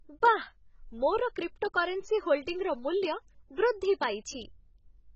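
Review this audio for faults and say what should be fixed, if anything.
The whole clip is dull and smeared, with nothing above about 7.9 kHz, and there's a watery, fizzy warble on the sibilants and held vowels from start to finish. That's likely AAC compression, AAC-LC pushed hard. The damage is heavy enough to point to a bitrate around 16 kbps, where the encoder drops the top of the band and starves the remaining spectrum, leaving gaps that swirl as they change frame to frame. To avoid it, encode the speech at a higher bitrate or keep a lossless master and compress only once at the end.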